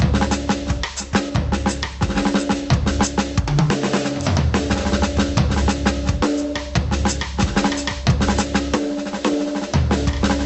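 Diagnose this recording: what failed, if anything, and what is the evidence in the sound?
Gain pumping runs through the whole piece of music: the gain swings around 20 dB, so everything sounds squashed. Likely cause is mic gain set far too high, with a fast limiter in call processing clamping it.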